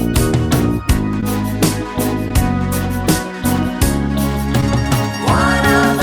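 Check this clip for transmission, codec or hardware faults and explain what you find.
Three brief faults are present, all short concealed packet loss: at 1.20–1.23 s, 2.28–2.31 s and 4.61–4.63 s. Audio arrived too late, and the decoder extended the preceding sound to bridge each gap. The result is a brief smear or wobble rather than the hard silence of a dropout.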